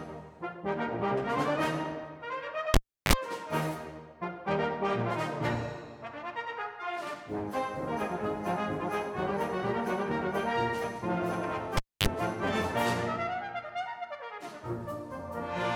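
At 2.74 s a cable is pulled and plugged in while live. A pop cuts the signal, leaving near silence for about 340 ms. Then a 47 ms burst of 50 Hz mains buzz sounds as only the plug tip touches, before a second pop restores the audio at 3.13 s. The same fault recurs from 11.77 s to 12.07 s, with a shorter 250 ms dropout and a 40 ms buzz at 50 Hz.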